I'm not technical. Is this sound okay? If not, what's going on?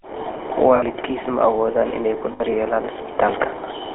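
No, not quite. The whole recording went through the old GSM full-rate codec, the original mobile phone voice compression. It rebuilds the voice from a rough model, so everything sounds buzzy and gravelly, and the line cuts off the highs above about 3.4 kHz, leaving it muffled.

There are also two spots of lost GSM frames, around 0.76 to 0.84 s, right before "ma awoodaan inay ku", and 2.32 to 2.41 s, just after it. The phone patched each gap by repeating the last good bit, giving a brief metallic ring.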